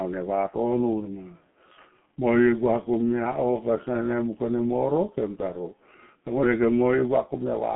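The whole of the speech passed through a G.723.1 codec, which fits its 6.3 kbit/s mode. It refreshes its vocal model only once per 30 ms frame and discards everything above 3.8 kHz, leaving a 150 Hz to 3.4 kHz band. The result is heavily muffled, hoarse speech with smeared consonants.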